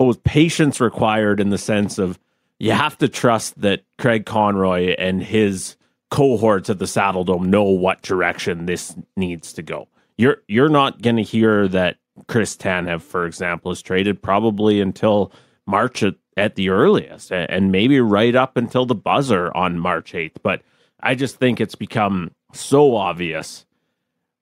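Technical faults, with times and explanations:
Listening to the speech from beginning to end, nothing technical stood out.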